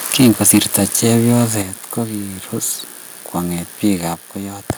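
From 0.06 to 1.44 s, ending just before "kogirus kwonget", the speech has a harsh, crackling edge, likely from microphone overload: peaks about 12 dB over full scale, with roughly one sample in twenty flattened. At 0.21 s the microphone volume is stepped down by about 2 dB, a sudden drop in speech and background level, likely automatic input gain reduction. Further step-downs follow at 1.62 s, about 6 dB just before "kogirus kwonget", and at 4.14 s, about 4 dB just after it.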